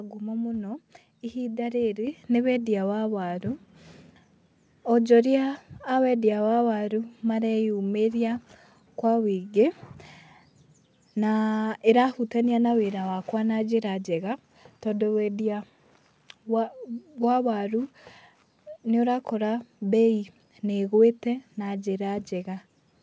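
At 2.07 s, between "ngumo mũno ihinda rĩrĩ" and "nĩ wendia wa waru", speech and background jump about 5 dB louder together in a single step. This is a microphone volume stepped up: the call software judged the input too quiet and raised the device gain.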